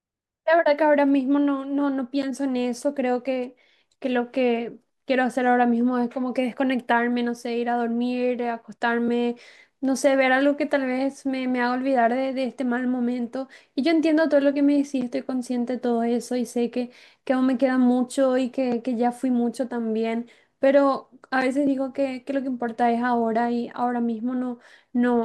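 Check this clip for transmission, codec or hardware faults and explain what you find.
I find no faults to explain in this speech.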